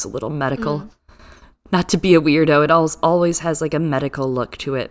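Nothing in the recording stood out as a problem on listening.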